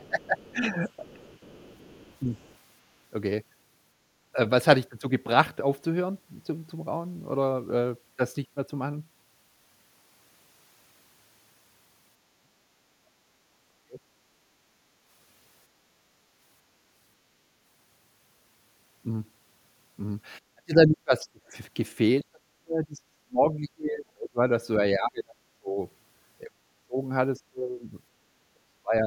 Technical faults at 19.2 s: none

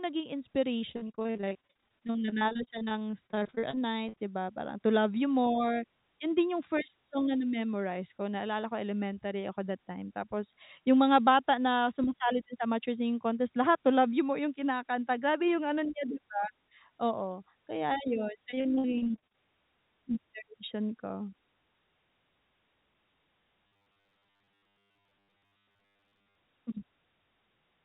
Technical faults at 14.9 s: none

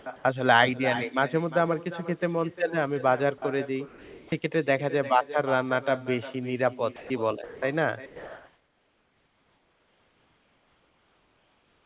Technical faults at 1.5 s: echo with no canceller

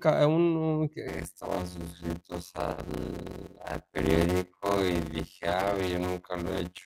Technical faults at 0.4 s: none

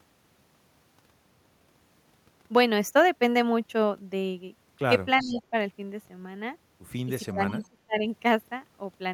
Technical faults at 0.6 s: none

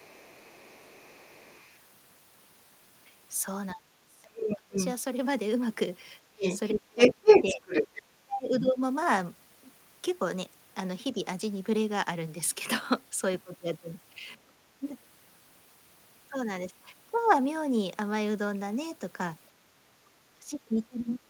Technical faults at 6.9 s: speech suppressed in double talk; other side's voice leaking through

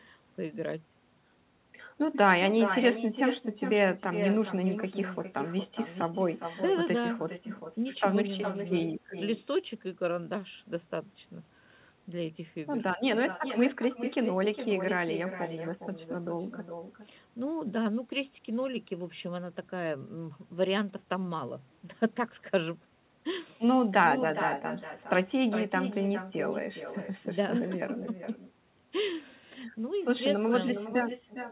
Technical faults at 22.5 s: echo with no canceller

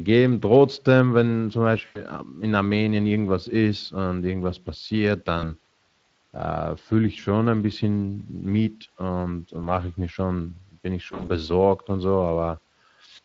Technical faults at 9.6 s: Speex codec; VoIP packet loss concealed by the speech codec

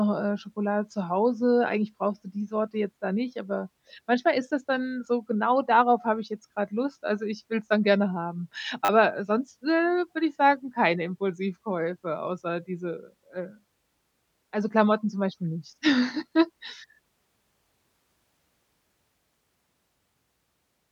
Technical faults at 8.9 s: repeated buffer

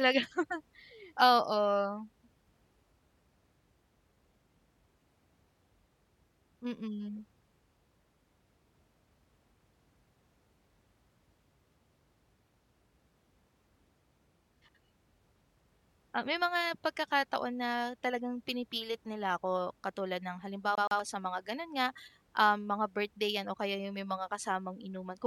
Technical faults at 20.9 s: CD stuck on one turn

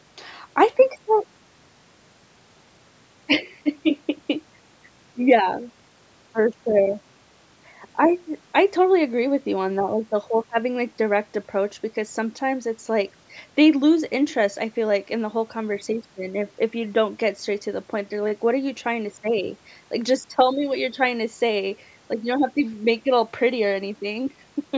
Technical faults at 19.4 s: none

